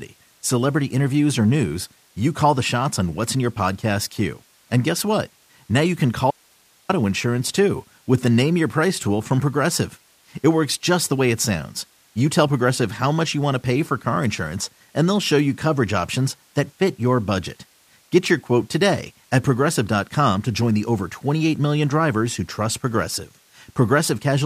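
At 6.31 s speech cuts abruptly to faint hiss for 0.58 s, an audio dropout to a faint residue: signal likely lost, path still live.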